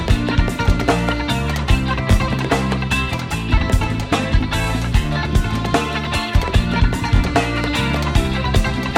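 At 2.12 to 2.14 s, 4.64 to 4.66 s and 7.16 to 7.19 s the audio has a short stutter caused by overlapping chunks. The signal was handled in blocks about 2.5 s apart, and each block began slightly before the previous one finished, so roughly 21 ms of material plays twice at every join. The duplicated fragment is heard as a brief click or hiccup that returns at that steady 2.5 s interval.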